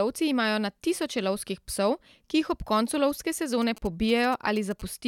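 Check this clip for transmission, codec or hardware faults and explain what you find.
One hardware-side interference fault is present. From 3.62 to 4.81 s, a galloping dit-dit-dit of brief buzzes at about 217 Hz sits roughly 20 dB under the speech. These are GSM signalling bursts: a nearby 2G phone's short radio transmissions get rectified by the audio circuitry and demodulated into this sound.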